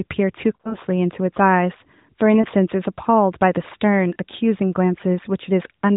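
Lost AMR speech frames: the decoder covered dropped frames by reusing the last good settings at falling gain. The result is a smeared, warbling stretch from 0.56 to 0.76 s, then brief dips at 2.42 to 2.46 s and 4.14 to 4.16 s.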